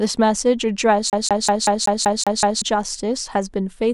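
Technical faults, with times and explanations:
1.10 to 2.62 s, CD stuck on one turn: the speech suddenly locks into a fast, even stutter, the same 190 ms slice coming round eight times, with a tiny mute at every jump back. That's the classic skipping-disc sound: a scratch knocks the laser back a track at the same point on each rotation, so it keeps rereading one revolution's worth of audio until it finally tracks past the damage.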